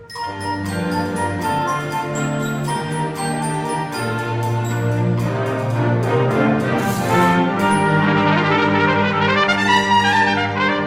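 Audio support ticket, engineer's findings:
No faults found on listening; nothing in the signal chain needs attention for this ticket.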